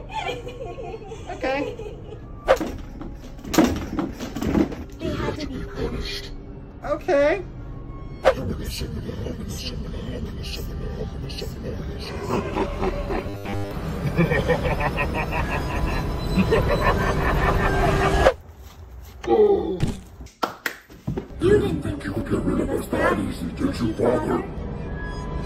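Robotic sound from repeated short buffers appears from 13.27 to 13.71 s. The sound turns into a rigid, metallic buzz fixed at 100 Hz that only loosely tracks what it replaces. The likely cause is new audio arriving too seldom, so the playback software keeps repeating the last short chunk, which fits a 10 ms buffer, while the real audio in between is skipped. Across that stretch, most of what is heard is repetition rather than fresh audio.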